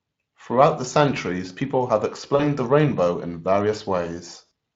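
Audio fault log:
2.35–2.43 s and 4.45–4.50 s: VoIP packet loss concealed by the speech codec. After "the centuries people have" and before "the rainbow in", a 40 ms gap, then a 60 ms gap near the end, each fitting 20 ms frames. The Speex decoder extends its last pitch and filter at falling gain, giving a fading buzzy tone or coloured noise. A spectrogram shows frozen, dimming harmonic stripes, and the waveform shows a repeating, shrinking cycle.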